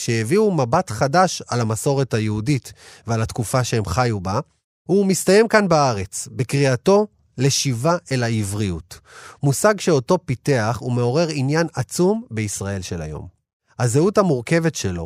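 Nothing technically wrong turns up anywhere in this speech recording, so there's no fault to point to and no cause to explain.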